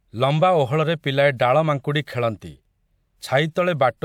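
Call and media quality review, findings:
Nothing to flag here; the speech comes through without any fault worth a ticket.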